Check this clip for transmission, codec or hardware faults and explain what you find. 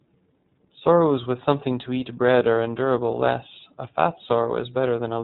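The speech is band-limited and audibly coded from start to finish. Nothing reaches above about 4 kHz, so sibilants sound dull, and the voice has a rough, slightly synthetic grain throughout. This is the iLBC codec, a narrowband VoIP coder. It encodes the excitation of each frame independently of the previous one, and the texture here fits 30 ms frames at about 13.3 kbps. That low-bitrate coding is what produces the plainly audible graininess.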